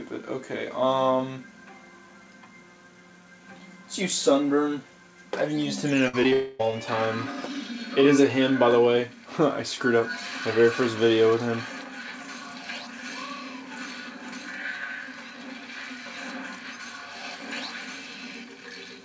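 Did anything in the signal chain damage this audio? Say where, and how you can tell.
Yes, the network stage damaged it, in one cluster of faults around 6 seconds. The audio comes through a WebRTC call path whose G.722 codec, at a rate that fits 64 kbps, leaves nothing above 8 kHz.

A burst of packet loss runs from 6.08 to 6.15 s. About 60 ms of audio never arrives. The receiver extends the last sound for roughly 52 ms as a fading buzz or hiss, then resumes further on with the in-between portion gone. The skip after the held sound separates it from a brief smear. It is also too short to reach silence, unlike a dropout.

Two short concealed packet losses follow, at 6.23–6.26 s and 6.30–6.33 s. Each loses about 20 ms. Concealment patches only 10 and 12 ms of that before blending back into real audio. Each one is heard as a quick smear or wobble, and a brief sound can disappear. They differ from the burst because the lost span is tiny and no held buzz is heard.

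From 6.33 to 6.61 s the audio is replaced for about 260 ms by a continued buzz or hiss that decays. It never falls fully silent. The audio then returns further on with that stretch missing. The length points to a likely long network dropout rather than another short burst, because the loss lasts more than a quarter-second and comes straight after the two short losses.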